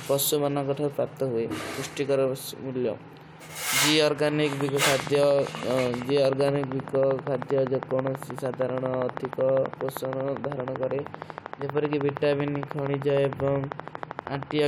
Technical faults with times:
4.53-14.60 train of clicks

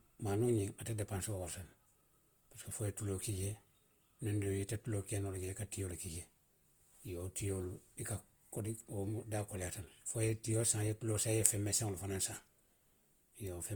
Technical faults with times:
0.00-13.75 Opus compression

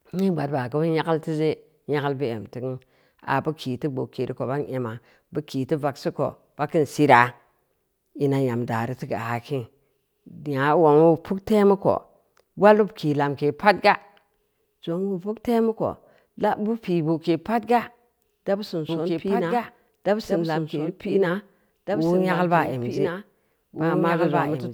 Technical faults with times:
18.89-24.73 doubled audio track

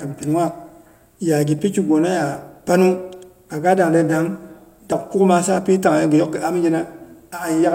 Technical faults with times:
1.59 dropped buffer (overrun)
4.92 dropped buffer (overrun)

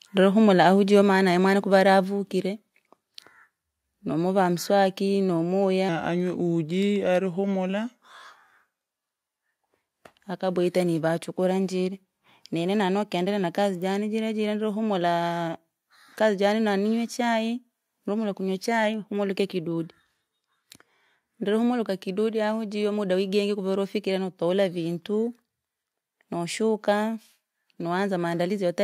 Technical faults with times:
1.02 microphone volume stepped down
2.04 microphone volume stepped down
5.37 microphone volume stepped down
5.89-8.91 section at the wrong speed

